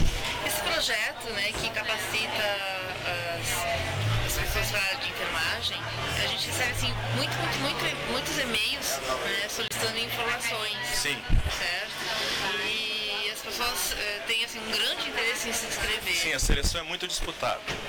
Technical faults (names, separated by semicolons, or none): broken MP3 bit reservoir